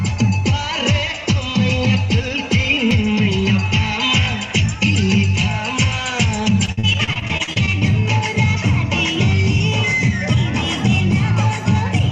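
From 6.65 to 7.83 s there is repeated packet loss, heard as robotic sound: fifteen short gaps, none longer than 53 ms, each patched by extending the preceding sound, so about a third of the stretch is filled-in. On a spectrogram this appears as repeating smeared, stretched bands.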